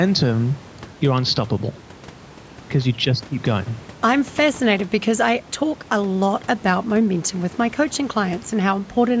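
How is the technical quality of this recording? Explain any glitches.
No glitches to report here: the speech comes through a call's usual microphone processing, so nothing reaches above 8 kHz and the deepest bass is trimmed as expected, with some room noise sitting about 24 dB below the speech.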